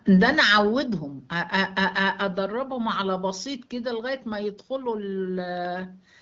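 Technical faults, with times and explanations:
No technical faults detected.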